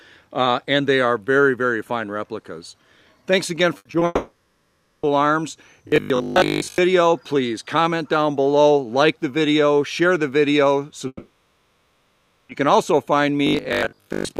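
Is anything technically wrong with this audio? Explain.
Yes, the audio has several network faults clustered around 4 seconds, with more later.

A burst of packet loss at 3.77 to 3.87 s replaces 80 ms with a continued, fading copy of the preceding sound. On a spectrogram it appears as smeared, flattening bands.

Short concealed packet loss follows at 3.91 to 3.95 s and 3.99 to 4.03 s. Each 20 ms hole is patched and blended back in, heard as a brief smear or wobble, and seen as a small blurred patch.

A long network dropout at 4.05 to 5.05 s likely comes from roughly a second of audio never arriving. It is filled by a decaying buzz or hiss that never reaches silence, so the waveform shows a tapering, featureless stretch. A second dropout at 11.07 to 12.51 s fills about 1.4 s, ending in 40 ms of silence before the audio returns.

Robotic sound from repeated short buffers at 5.88 to 6.80 s and 13.47 to 14.39 s is likely caused by late audio being padded with repeats of the last 20 ms. 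This imposes a rigid, metallic 50 Hz buzz over most of each stretch. It shows as evenly spaced vertical striations and a periodic waveform.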